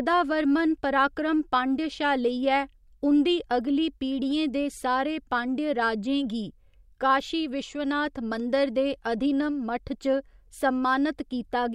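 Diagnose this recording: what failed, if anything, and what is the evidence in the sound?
Nothing in the speech stood out as a fault on listening, and no stage of the chain shows audible evidence of failure.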